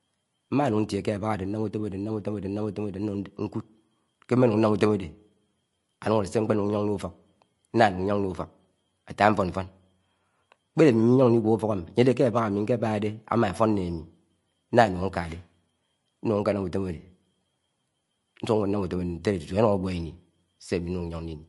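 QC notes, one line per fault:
Throughout, MP3 compression: the speech has nothing above 11.3 kHz and a watery, swirly texture with metallic s sounds, likely from a bitrate near 44 kbps. A spectrogram shows a hard ceiling at 11.3 kHz and flickering holes in the upper bands.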